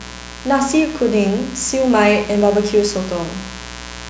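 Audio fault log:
throughout: mains buzz, a steady raspy buzz about 15 dB below the speech, from switching spikes twice per 60 Hz cycle throwing harmonics up into the kilohertz range.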